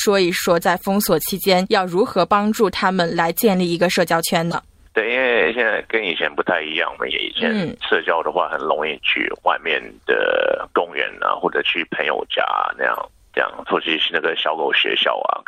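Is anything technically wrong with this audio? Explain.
Yes. Corrupt frames were decoded at 4.51–4.54 s, 11.14–11.16 s and 12.92–12.99 s. Damaged bits misplace spectral energy, producing brief chirps or noise bursts, loud at 4.5 and 12.9 s and faint at 11.1 s, unlike a dropout, which silences rather than adds sound.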